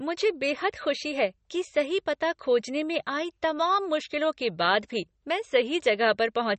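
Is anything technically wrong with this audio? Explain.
Yes. MP3 compression runs throughout: the speech has nothing above 8.4 kHz and a plainly audible watery swirl. That is likely an encoder near 33 kbps cutting the treble and toggling weak frequency lines between frames.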